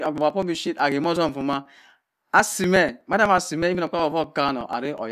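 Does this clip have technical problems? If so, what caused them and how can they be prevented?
Yes. Periodic USB or driver dropouts run from 0.06 s to 4.98 s: around forty short ticks, spaced evenly every 0.123 s, audible only where the speech carries signal. A background task appears to stall the USB bus or audio driver at that fixed interval, and each time roughly 2 ms of audio is skipped outright rather than padded with silence, so the waveform jumps and clicks. Prevention: update or change the audio driver, disable power-saving on the USB port, and stop the offending background task.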